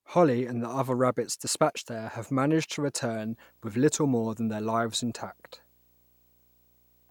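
From 3.21 s to the end of the speech, there's video or display buzz: a screen or video cable is leaking into the audio path, giving a 59.94 Hz buzz with hash on top, a faint whine at 15.7 kHz, all sitting well below the voice.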